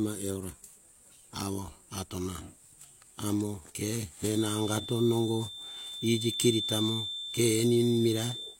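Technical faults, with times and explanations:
4.23 to 8.59 s, feedback whistle: likely a loudspeaker-to-microphone loop poised just short of runaway keeps one tone at 3.6 kHz ringing, heard from just after "amo ke" to the end as a thin steady-pitched whistle about 10 dB under the speech, slowly swelling and fading without growing into a howl.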